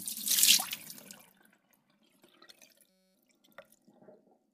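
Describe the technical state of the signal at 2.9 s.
At 2.9 s the audio falls into a system hang loop, lasting from 2.90 s to 3.15 s. The system stalled while the output hardware kept replaying one 5.33 ms slice of its ring buffer, consistent with a 256-sample buffer, 47 times over. Because the slice is so short, it fuses into a steady buzz at 188 Hz rather than an audible stutter. Unlike a mains hum, the buzz starts and stops abruptly, and almost no audio goes missing afterwards.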